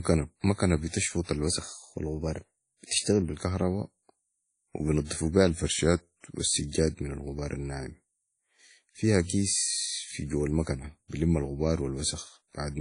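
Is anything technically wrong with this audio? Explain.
Yes. The speech carries three kinds of technical fault.

Throughout, the sound is ringing and washy, with a hiss that rises and falls with the signal and nothing above about 10.1 kHz. The codec damage is plainly audible. The likely cause is WMA compression, whose quantisation noise smears across long transform blocks, at a low rate that fits roughly 32 kbps.

From 1.47 to 3.42 s, speed and pitch rise together by 5.77% and about 97 cents. From 5.50 to 6.36 s, they drop by 5.77% and about 103 cents. Both are likely a drift correction step, where clock-matching software abruptly changes playback rate to manage its buffer.

At 2.86 to 2.91 s, a short hiss lasting about 52 ms precedes an attack, which sounds softened. This is pre-echo. The codec spreads its noise evenly across a block, so noise sized for the loud attack also fills the quiet moment before it.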